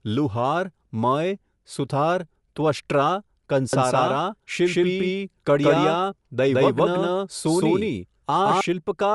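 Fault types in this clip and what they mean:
Bluetooth LC3 compression: Throughout, the speech has a breathy, grainy edge and nothing above 11.6 kHz, with plainly audible codec damage where upper bands are zeroed and noise-filled. This is likely Bluetooth LE Audio's transform codec, consistent with roughly 48 kbps and 10 ms frames.
Doubled audio track: From 3.73 to 8.61 s, a second full-band copy runs around 150 ms behind at roughly equal level, with no decay or room colour, starting and stopping abruptly. A slower capture path or an edit holding two out-of-step copies is the likely cause.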